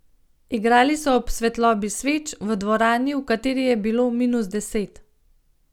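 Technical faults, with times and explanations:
No technical faults can be heard in this speech.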